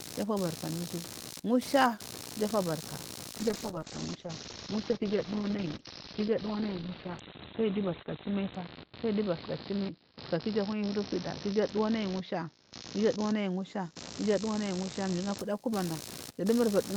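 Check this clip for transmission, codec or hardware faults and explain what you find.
Two faults are present: a buzzing interference running through the whole recording, and a long stretch where the speech turns coarse and muffled.

Computer activity noise: a buzzing, scratchy pulsing sits under the speech from start to finish, repeating roughly seventy times a second at a level only about 10 dB below the speech. Changing load from the processor or graphics hardware is disturbing the audio circuit's shared ground, so the noise follows the machine's activity rather than the speech.

Call bitrate drop: from 3.40 s, just after "anu iju musha ijufobarka", until 15.44 s, the speech turns rough and muffled, with everything above 4 kHz gone instead of reaching 20 kHz. It is at its worst for about 4.96 s. The call's bandwidth estimate fell, so the encoder coded more coarsely and cut the high band. 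The sound points to a fall from about 32 kbps to about 11 kbps.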